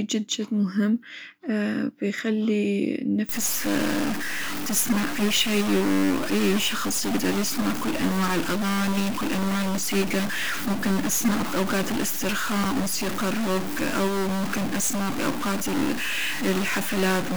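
From 3.29 s to the end, the speech takes on a harsh, buzzy distortion, and the pauses fill with a steady hiss-like grit instead of falling silent. The likely cause is a stuck bit, one converter or data line held at a fixed value, adding an error of roughly -25 dBFS to about half the samples. Unlike clipping, the damage doesn't depend on loudness, which is why the gaps between phrases are noisy too.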